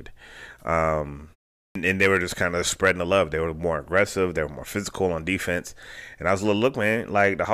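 At 1.61 s, a clipped start after a pause: following 0.34 s of silence, the output wakes late and swallows about 144 ms, so speech begins abruptly, unlike muted pauses, which lose nothing.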